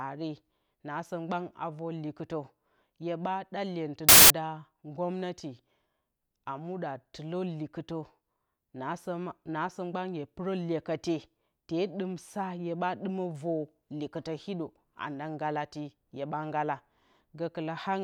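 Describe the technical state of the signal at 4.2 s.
At 4.2 s the file tags are played as audio, from 4.09 to 4.30 s. An embedded cover picture's compressed bytes are read as samples. It sounds like a hard-edged burst of very loud white noise.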